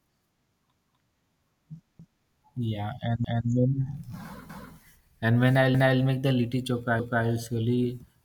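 Overlapping chunks: each new chunk began 250 ms before the previous one ended, so a quarter-second of speech replays as a stutter at 0.74, 1.99, 3.24, 4.49, 5.74 and 6.99 s.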